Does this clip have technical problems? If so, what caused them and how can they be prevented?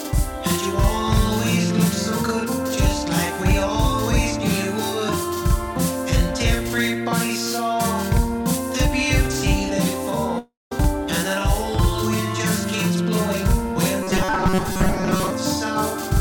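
Yes. Throughout the clip there is a channel delay (doubling): one channel trails the other by about 46 ms, which fits a 2048-sample buffer, so the mono sum carries a slap echo. A waveform shows each onset twice. Align the channels before summing.

From 10.38 to 10.72 s there is a long network dropout, likely from packet loss. About 0.33 s of audio is missing. The fill decays into a fading buzz, then near-silence, and the spectrogram shows a smeared band then a dark gap. Larger jitter buffers or a steadier connection prevent it.

From 14.03 to 15.30 s there is robotic sound from repeated short buffers, likely from audio arriving too seldom. Most of the material is replaced by repeats of a tiny slice, imposing a rigid 188 Hz buzz. The spectrogram shows evenly spaced horizontal harmonics. Steadier delivery and adequate buffering prevent it.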